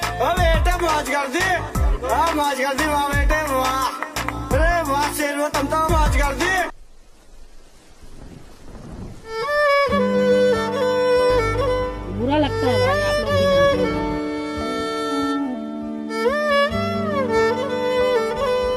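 No technical faults can be heard anywhere in this audio.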